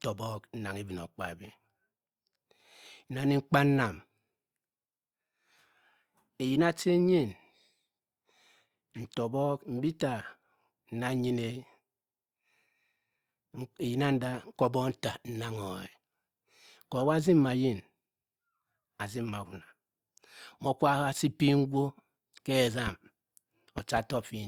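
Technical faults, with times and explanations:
22.87–22.90 s, loud pop: a single sharp pop sits a few decibels above the speech, which continues underneath. A brief voltage step, likely from a connector, switch or static discharge, was added to the signal, and the downstream stages shaped it into a short transient.
23.78–24.00 s, loud pop: two pops in quick succession, peaking around 10 dB above the speech, again over uninterrupted speech. This is likely a repeated electrical glitch, such as an intermittent contact, producing a double pulse.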